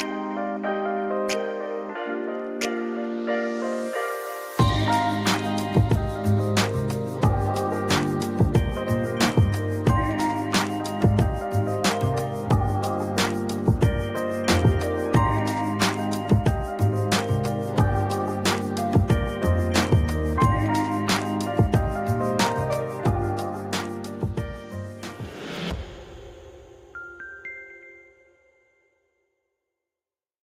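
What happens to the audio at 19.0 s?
Nothing goes wrong at 19.0 s; the audio runs through that moment intact, with no audible fault.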